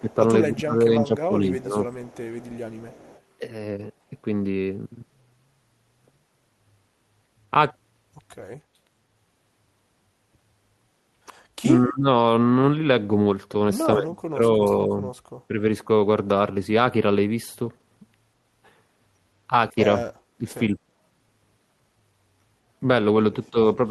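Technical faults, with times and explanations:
0.01–1.76 s, 11.64–12.07 s, 13.97–15.06 s, 15.48–15.63 s, 20.0–20.73 s and 23.51–23.79 s, speech suppressed in double talk: the speech level dips and partly cuts out, from a slight 5 dB drop to a near-dropout of about 40 dB at 13.97–15.06 s. The likely cause is an echo canceller attenuating the near talker while the far side also spoke.
1.92–3.2 s, echo leak: a faint delayed copy of the speech trails it by 196 ms, roughly 30 dB below the direct sound. The likely cause is residual loudspeaker pickup that the far end's echo canceller failed to remove and sent back.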